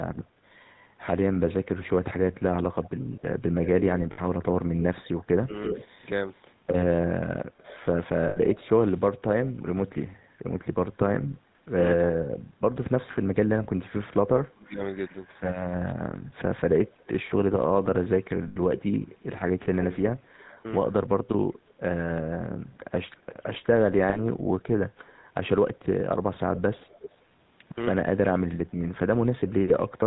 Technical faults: GSM full-rate codec; lost GSM frames

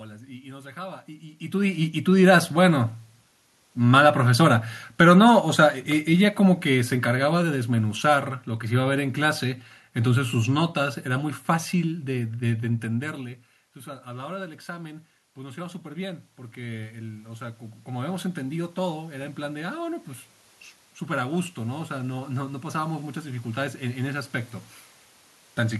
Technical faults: automatic gain rising; automatic gain falling

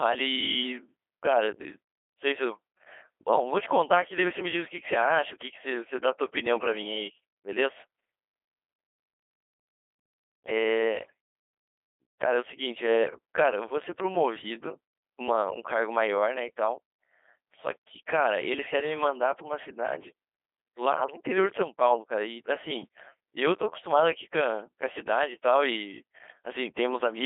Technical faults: Codec 2 vocoder

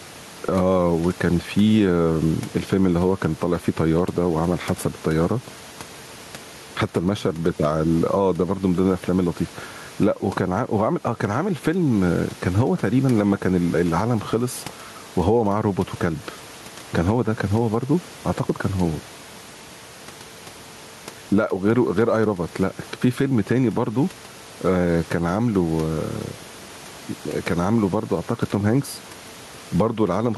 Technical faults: gain pumping

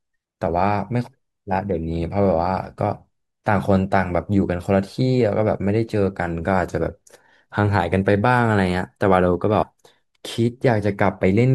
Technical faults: compressed frames skipped

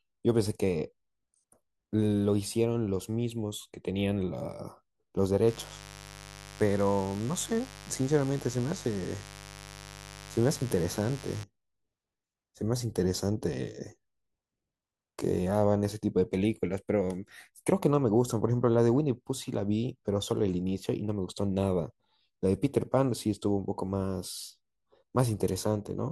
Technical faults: mains buzz

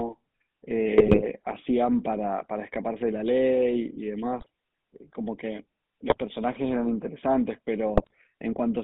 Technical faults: GSM full-rate codec; GSM bit errors

